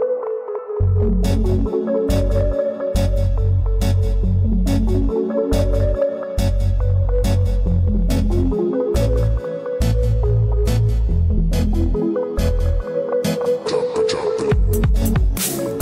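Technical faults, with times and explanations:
Throughout, hard clipping: the level runs about 2 dB hotter than the stage can pass, so around 2 percent of the samples get sliced flat. Those squared-off tops throw harmonics up high, which is why loud moments carry crackle.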